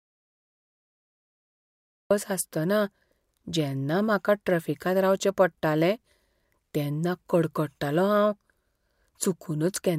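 From the very start until about 2.1 s the clip is dead silent, with no room tone, hiss or faint background beneath it, and then the speech comes in already mid-flow rather than starting cleanly. That is an audio dropout to silence that was already under way when the recording began. The input was likely lost, perhaps through a disconnected source or a muted channel, while the recorder kept writing silence, so whatever was said in those first two seconds is missing.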